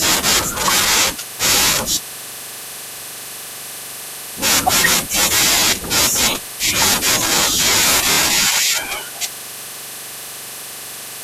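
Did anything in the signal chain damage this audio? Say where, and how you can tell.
Yes. Repeated frames occur at 8.11 to 8.17 s, in the compressed-data stage, during storage or transmission. A 26.1 ms block plays twice more, which fits a single compressed frame being duplicated. The result is a short stutter, and the speech runs 52.2 ms longer.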